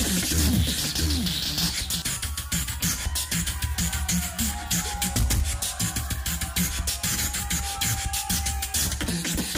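From the start of the clip until about 2.02 s, the audio carries a doubled audio track. A second full-band copy trails the original by roughly 0.7 s at about equal level, with no decay or room colouring, and then stops abruptly. A waveform shows every transient repeated at that fixed spacing, and a spectrogram shows identical patterns offset in time. The likely cause is a slower second capture path or an edit holding two misaligned copies.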